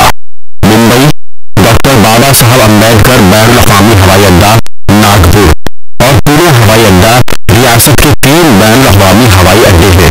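From start to finish the speech is a loud, harsh distortion with soft sounds as loud as the words, unlike plain 8-bit grain, likely signed and unsigned samples mixed up.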